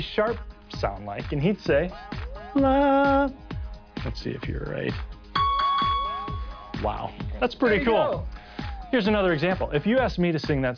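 Nothing is technically wrong with the clip.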